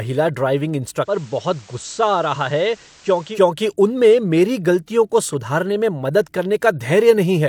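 At 1.01 s the speech blends from digital to analogue FM over 179 ms: hiss appears, level drops about 4 dB, returning at 3.42 s.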